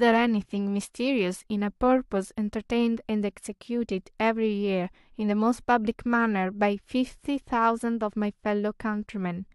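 No technical faults are audible.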